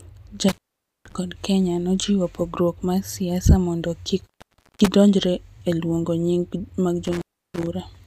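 The speech drops out three times, each dropout framed by crackle and leaving faint hiss: from 0.49 to 1.15 s, with the line open about 0.47 s; from 4.20 to 4.88 s, just after "pogruok mar siasa mondo", open about 0.54 s; and from 7.05 to 7.67 s, open about 0.33 s. This is intermittent contact. A loose plug or cable briefly breaks the connection, and the scraping contacts crackle as it opens and closes.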